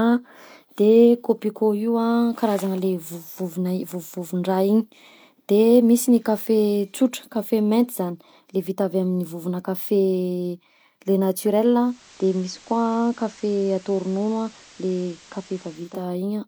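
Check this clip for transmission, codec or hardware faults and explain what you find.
One fault is present. From 11.70 to 16.10 s, hiss about 25 dB below the speech appears and the level drops by about 1 dB: the receiver is blending digital radio to analogue FM, cross-fading over 419 ms.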